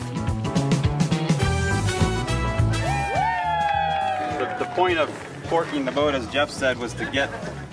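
No technical faults can be heard anywhere in the audio.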